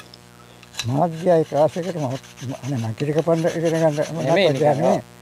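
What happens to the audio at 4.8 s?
Mains buzz runs through 4.8 s, as it does across the whole clip. Sharp switching spikes from the 60 Hz supply, arriving twice per cycle, leak in and spread harmonics up into the kilohertz range, giving a steady, raspy buzz roughly 25 dB below the sound.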